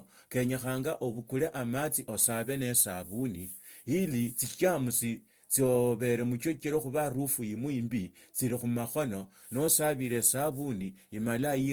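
Opus compression runs throughout the speech, most likely from a low-bitrate Opus stream in its music mode, with content reaching about 20.2 kHz. The band energies are kept, but starved bands are refilled by folding or noise, so the speech sounds plainly grainy, rough and hissy rather than swirly.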